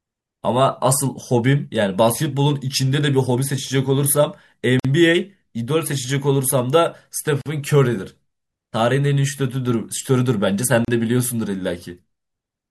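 At 4.80 s, 7.41 s and 10.85 s the speech breaks for about 51, 44 and 34 ms: a gap at a join of encoded pieces, where each separately encoded piece kept its start delay and padded last frame. Unlike a dropout, nothing is lost, and the sound resumes exactly where it stopped.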